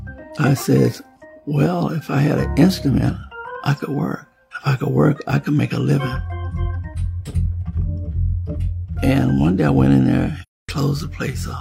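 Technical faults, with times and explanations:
10.42–10.69 s: AAC frame loss with muting. The sound fades out, goes silent for about 256 ms, then fades back in. The decoder zeroed the missing spectrum, and overlapping windows soften both edges of the hole. The gap fits about six lost frames.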